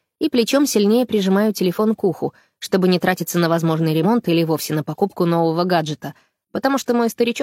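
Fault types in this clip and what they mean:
Damaged data in a compressed stream: corrupted bytes made the decoder misread frames and lose sync, producing a brief glitch from 4.00 to 4.05 s.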